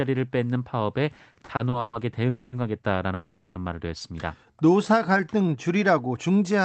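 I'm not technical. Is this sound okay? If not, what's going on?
No. Repeated stalls (stutter) run from 1.15 to 1.95 s: the speech kept arriving late, so the call software stretched the last sound to fill eight short gaps, the longest 130 ms. Nothing is lost, but that stretch drags and stutters.

Call audio freezes occur at 2.29 to 2.54 s and at 3.14 to 3.57 s. The speech hangs for 230 ms and then 410 ms, filled with a fading continuation of the last sound, then resumes where it stopped. The likely cause is a hold-up on the network.

A jitter buffer slow-down runs from 4.46 to 5.58 s. To build a small reserve of audio, the software repeated tiny pieces of sound, adding 156 ms. The speech plays at about 87% speed with unchanged pitch, so sounds seem drawn out.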